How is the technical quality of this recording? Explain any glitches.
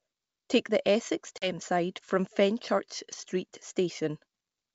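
The speech has one clear glitch, from packet loss on an ADPCM call. At 1.38 s there's a hard-edged gap of 40 ms, about two packets' worth, filled with silence. Since the decoder's predictor and step size lose track of the sender's, the speech comes back slightly distorted, and settles by about 1.55 s. Under that, the G.722 wideband coding at 64 kbit/s comes through with little or no audible codec damage.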